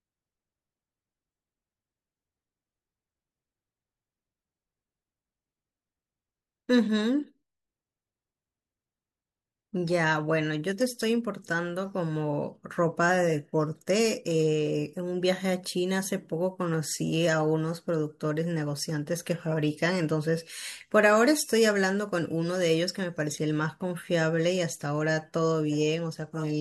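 Nothing stood out as a technical fault while listening to this speech recording.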